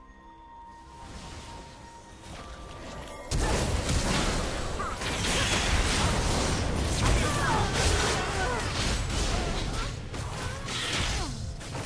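No technical faults can be heard anywhere in the clip. Nothing in the audio points to a problem at any point along the way.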